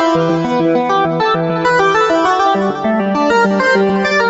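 Nothing here sounds wrong; the audio just carries the usual character of a call, with the top end stopping at about 8 kHz, as you'd expect from the microphone processing and codec on a call line.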